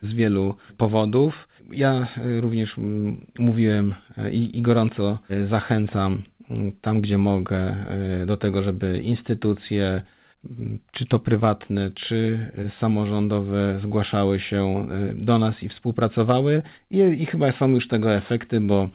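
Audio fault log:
Nothing stood out on listening; the sound carries the narrow, telephone-like top end of the call path, with nothing heard above about 4 kHz.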